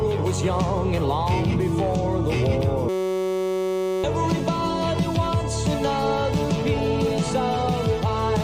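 The audio breaks into a steady buzz from 2.89 s to 4.04 s, a system hang loop. While the host or driver stalled, the sound hardware kept replaying the same ring buffer, so one 5.33 ms slice of audio repeats back to back. That short period produces a tone at about 188 Hz rather than a stutter, which fits a 256-sample buffer. Roughly a second of the real signal is missing, replaced by the loop.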